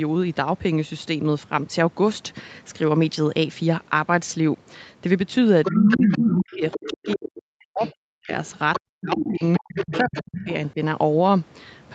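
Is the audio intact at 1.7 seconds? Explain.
Yes, the speech is intact at 1.7 seconds, with nothing beyond the normal call microphone processing and WebRTC call path, which limit the sound to about 8 kHz.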